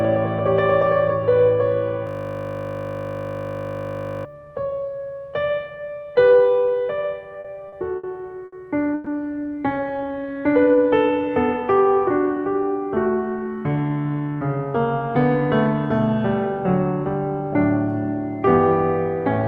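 A music clip carried over a call path whose Opus coding leaves its usual coding noise and a spectrum that stops around 12 kHz, which fits a bitrate near 32 kbps, breaks down in several distinct ways. From 2.07 to 4.25 s there is a system hang loop: the driver or machine froze while the sound hardware kept replaying the same 20 ms stretch of its ring buffer, so the music is replaced by a steady 50 Hz buzz as that fragment repeats over a hundred times. On a waveform the span shows one identical short cycle tiled end to end, and a spectrogram shows flat horizontal lines at 50 Hz harmonics with no musical movement. Between 7.33 and 8.06 s come repeated stalls (stutter), with four separate gaps totalling 160 ms, the longest 70 ms, covering about a fifth of that span. Packets arrived late again and again, the jitter buffer kept emptying, and each time the receiver extended the last sound until data resumed. 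Nothing is lost, but the passage drags and hiccups, and a spectrogram shows short smeared, frozen columns between normal stretches. At 8.45 to 8.55 s a short stall from a late packet holds one sound about 70 ms too long while the buffer waits for the missing packet. It is heard as a brief drawn-out note with a slight buzz or dip, seen as a single smeared band of unchanging harmonics before the music picks up exactly where it left off. From 8.94 to 9.09 s the audio freezes for about 120 ms into a fading buzz or hiss continuing the last sound without going fully silent, then continues from the same point. This is a call audio freeze, likely caused by packets held up in transit so that the buffer ran dry. On the spectrogram it appears as a decaying, blurred block rather than a true gap. From 9.74 to 11.31 s a jitter buffer slow-down plays the music at about 87% speed with unchanged pitch. The receiver was building up reserve by repeating single pitch periods and bits of quieter moments, adding about 217 ms in total, so notes sound stretched. 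On a waveform, repeated near-identical cycles are visible, and on the spectrogram the note events are spaced further apart. From 13.39 to 14.67 s the opposite happens with a jitter buffer speed-up. Too much audio had piled up, so the receiver trimmed short pitch-period pieces to cut delay, removing roughly a fifth of a second. The music runs at about 118% speed at the same pitch, sounding hurried and losing its steady tempo, and the spectrogram shows events squeezed closer together with small splice discontinuities in the waveform.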